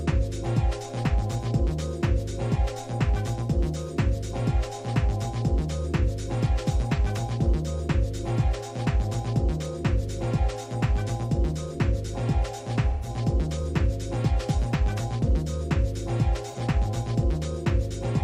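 At 12.90 to 13.09 s and 16.52 to 16.58 s, AAC frame loss with concealment smears the sound into a brief noisy, phasey patch, not a clean silent dropout.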